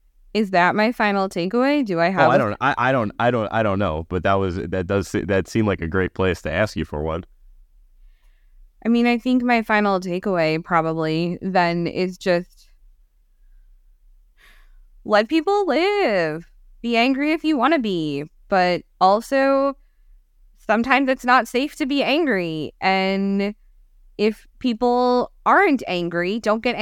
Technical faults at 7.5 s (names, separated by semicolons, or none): none